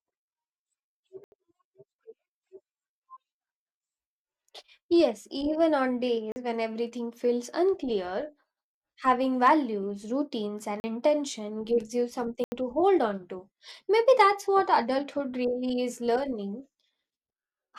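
Block of digital silence at 1.24 to 1.32 s, an 80 ms hole in the speech. Most likely the output buffer was not filled in time, so the samples were zeroed. The sound drops straight to nothing and returns with no fade. The same dropout recurs at 6.32 to 6.36 s (40 ms), between "even on" and "when everything feels unclear", where it is heard as a short hole.

Hard clipping at 9.45 to 9.51 s, just before "routines and intention gives". The peaks exceeded what the signal path could pass by about 2 dB, so their tops were sliced flat, adding high harmonics heard as a brief crackle on the loudest part of the syllable.

Further blocks of digital silence follow at 10.8 to 10.84 s (40 ms) and 12.44 to 12.52 s (80 ms), the latter between "and intention gives you" and "to hold on to". Each is an abrupt cut.

Hard clipping returns at 14.09 to 14.21 s, again overdriven by about 2 dB, giving a short crackle on the peaks. 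There is one more instant of clipping at 14.74 s, barely at the limit (about 0 dB).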